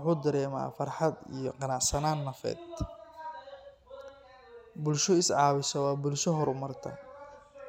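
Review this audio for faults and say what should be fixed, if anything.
Nothing here needs fixing; I listened to the whole speech recording and didn't hear a single technical fault worth flagging.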